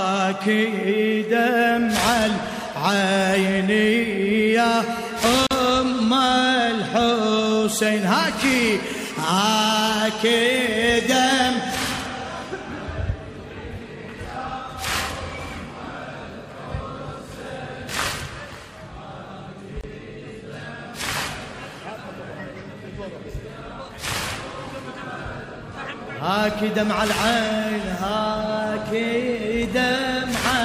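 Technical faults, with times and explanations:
5.47–5.51 s and 19.81–19.84 s: gap at a join of encoded pieces. The continuous sound drops out briefly, for about 42 ms and then about 26 ms. Each silence has edges smeared by the codec. The sound resumes exactly where it stopped. The pieces were encoded separately and joined untrimmed. Each encoder run left its start-up delay and last-frame padding in place, so silence sits at each join.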